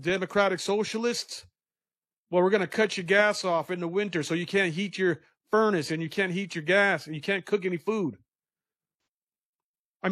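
Right around 8.98 to 9.07 s there's an AAC frame loss with concealment: about 85 ms of the speech drops out, which fits two lost frames, and the decoder papers over it by reusing the last good spectrum, so you hear a brief smeared, noisy, phasey blur.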